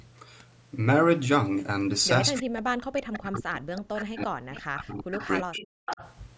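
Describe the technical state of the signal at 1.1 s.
At 1.1 s the speech is intact, with no fault present, only the ordinary band-limiting of call microphone processing.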